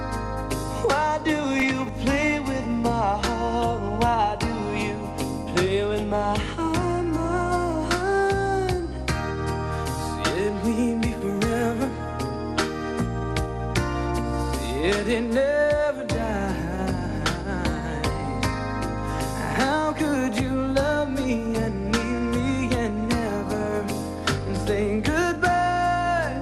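The audio sounds dull and muffled throughout, with a gurgling, granular grain as upper frequencies drop in and out and the remaining detail turns coarse. This is likely MP2 compression, where MPEG Layer II at a rate consistent with about 80 kbps leaves too few bits, so upper sub-bands are switched off and the rest are crudely quantised. Short bursts of noise blips appear from 15.98 to 16.01 s and again at 18.26 s. This is DAB burbling: weak reception lets bit errors at a rate on the order of a tenth of a percent slip past error correction, so wrong samples put short blips of noise into individual sub-bands. The first burst sounds like it spans several frames.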